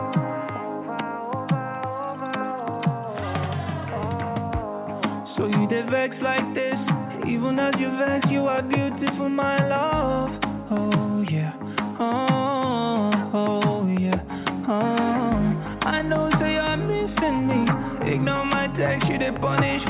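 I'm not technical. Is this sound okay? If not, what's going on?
Yes, it sounds fine, like an ordinary phone call.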